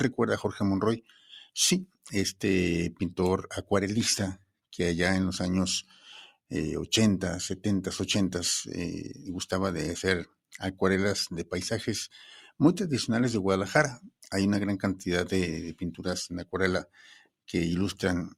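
A noise suppressor applied to music or sounds runs across the whole clip: built for speech, it treats sustained tones and ambience as noise, so the level breathes by roughly 5 dB. On a spectrogram, sustained partials and tails look patchy and eroded.

Sound cut by the noise suppressor appears at 1.0–1.29 s, 1.86–2.08 s, 4.37–4.56 s, 10.25–10.57 s, 14.04–14.28 s and 16.85–17.32 s. Each dips about 18 to 21 dB, leaving short hollow gaps that show as notches in the waveform envelope and vertical dark bands across the spectrogram.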